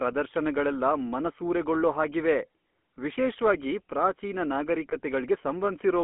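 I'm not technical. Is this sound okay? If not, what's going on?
No. The GSM full-rate codec colours the whole clip: this early mobile-phone coder rebuilds speech from a simple model of the throat driven by regular pulses, so the speech sounds buzzy and gravelly, with everything above about 3.4 kHz missing and a muffled, phone-line feel.

There are lost GSM frames from 4.9 to 4.97 s, which fits a single dropped frame. The phone filled the gap by repeating the last good frame, so that moment briefly turns into a rough, metallic ring instead of clear speech.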